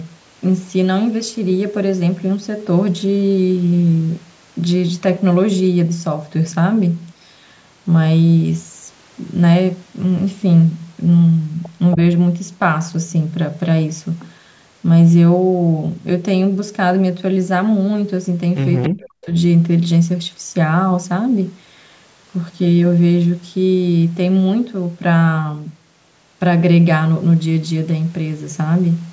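At 18.82 s, a short echo leak appears, lasting to 18.9 s. A faint copy of the speech returns about 279 ms after the original, roughly 10 dB quieter. It is only a brief scrap. The likely cause is a loudspeaker on the far side whose echo canceller missed part of what its microphone picked up. That leftover was sent back down the line.

Right after, from 18.89 s to 19.34 s, the speech is suppressed in double talk. The level falls hard, by around 40 dB at its deepest. About 0.4 s of speech is dulled or cut into pieces. Both sides were likely talking at once. The echo canceller could not tell the local talker from the echo, so it turned both down. The call's microphone processing is audible as a band limit, with nothing above 8 kHz.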